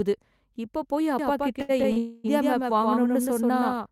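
From 1.19 s to 3.86 s a doubled audio track appears: a full-band copy trailing about a tenth of a second behind, a few dB quieter, likely from a second capture path. On a spectrogram every onset shows a shadow. At 1.61 to 1.71 s and 1.92 to 1.98 s, short stalls from a late packet hold the sound for 75 ms and 41 ms, appearing as smeared, flat stretches. A call audio freeze follows from 1.98 to 2.26 s: 259 ms of fading buzz or hiss, likely from packets held up in transit, visible as a frozen, decaying band with no silence.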